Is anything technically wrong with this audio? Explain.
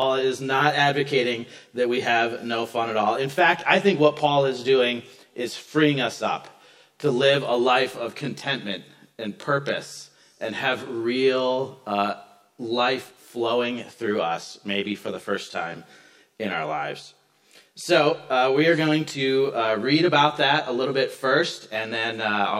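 Yes. Channel delay (comb filtering) runs throughout: one channel arrives roughly 20 ms late and the two are summed to mono, so shared content cancels at evenly spaced frequencies starting around 30 Hz. With a delay that long, the whole sound comes across as rough or slightly doubled.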